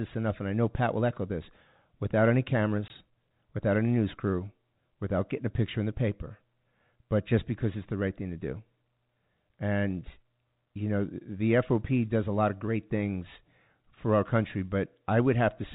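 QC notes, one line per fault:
2.88–2.90 s, packet loss filled with silence: right after "echo this without any" the speech drops out for 20 ms, a clean gap that fits exactly one lost 20 ms packet. The receiver played silence in its place, so the waveform stops and restarts abruptly. Unlike loss concealment, nothing is smoothed or repeated across the hole. The band limit near 4 kHz from G.711 telephone coding is unchanged on either side of the gap.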